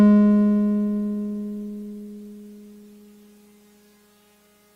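No technical faults can be heard anywhere in the music. Nothing interrupts or disturbs the sound at any point.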